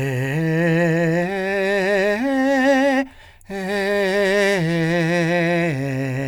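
No technical faults can be heard anywhere in this music.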